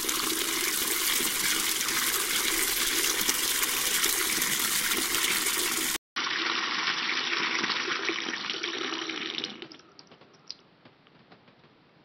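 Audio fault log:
5.96–12.04 s, input switched to a poorer device: after a 200 ms gap the sound loses everything above 5.8 kHz and gains new background noise roughly 30 dB below it, at roughly the same level. A narrower-band microphone likely took over. The spectrogram shows a blank strip, then a flat ceiling; the waveform keeps its height.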